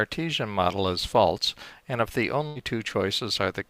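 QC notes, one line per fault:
2.47–2.57 s, burst of packet loss: a run of packets went missing, so the receiver extended the last sound for about 80 ms, fading it as the gap grew, giving a held, dying tail; playback then jumps ahead, skipping about 80 ms.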